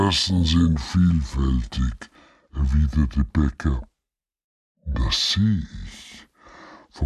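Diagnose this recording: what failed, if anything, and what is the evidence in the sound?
Wrong sample rate, throughout the clip, at the playback stage. Everything runs at two-thirds speed and sits about seven semitones low, with pitch and tempo falling together. That ratio fits material recorded at 48 kHz being clocked out at 32 kHz with no conversion.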